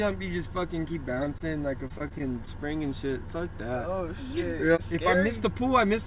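At 1.14 to 1.18 s, 1.24 to 1.28 s and 1.38 to 1.42 s, short concealed packet loss leaves roughly 20 ms of audio undelivered each time. The receiver bridges each hole by extending the preceding sound, so each shows up as a brief smear or wobble.

From 1.88 to 2.82 s, repeated packet loss opens six separate holes, the longest 24 ms, with about 11 percent of that stretch patched. The patches come in quick succession, making the sound choppy, with fragments missing. Throughout, the call path's band limit at 4 kHz, consistent with a G.711 telephone codec, leaves nothing above that frequency.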